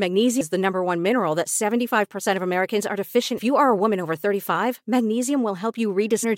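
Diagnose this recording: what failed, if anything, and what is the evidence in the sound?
Damaged data in a compressed stream at 0.40 s, 3.37–3.39 s and 6.23–6.25 s: corrupt codec frames make the decoder lose sync, producing brief glitches heard as a chirp, squawk, click or short hole.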